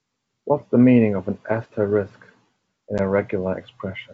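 Speech over a wideband G.722 link, with packet loss on an ADPCM call from 2.98 to 3.00 s: about one 10 ms packet becomes a hard-edged silent gap. Unlike a plain dropout, the speech comes back slightly distorted, with brief distortion, as the decoder's adaptive predictor resynchronises.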